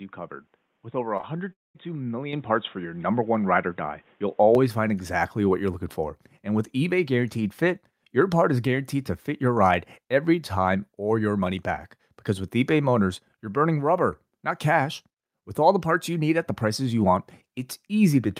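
From the start until 4.55 s, the input was likely switched to a poorer device, with a faint background noise about 45 dB below the speech. The voice sounds dull and boxy, then clears abruptly at 4.55 s, just before "find exactly what you're", with no gap and no level jump.

At 1.17 s and again at 1.21 s, two back-to-back short concealed packet losses occurred: each time about 20 ms of the stream arrived too late, and the decoder extended the preceding sound to cover the hole. Together they produce a brief smeared wobble.

From 1.53 to 1.76 s, a long network dropout likely cut off about 220 ms of audio. The receiver stretched the last sound into a fading buzz or hiss, then fell silent for about 0.2 s before the speech resumed with that stretch missing.

At 2.33 s, the microphone volume was stepped up by 7 dB when the call software raised the device's input gain in one move. The voice and the background jump louder together and stay at the higher level.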